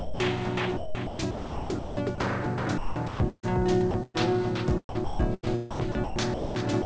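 From 0.0 to 0.20 s the opening sound is replaced by steady noise, most likely sound dropped by the voice detector. The sender treated the onset as background, stopped transmitting, and the receiver filled the gap with comfort noise. A spectrogram shows a flat, even wash with no structure. The waveform is a low, uniform band until real sound begins. The same thing happens right at the end, at 6.82 s, for about 30 ms.

Between those points, four stretches are likely chopped by the voice detector: 0.77 to 2.18 s, 2.78 to 3.46 s, 3.91 to 4.34 s, and 4.89 to 6.55 s. Inside each, the detector switched on and off repeatedly. Quieter parts of the sound were swapped for synthetic noise, about 0.9 s of it in the first stretch and about 0.75 s in the last. The result is choppy. The spectrogram shows detailed patches cut by smooth noise blocks with abrupt edges. Across the whole clip, nothing appears above 8 kHz, in keeping with the G.722 call codec.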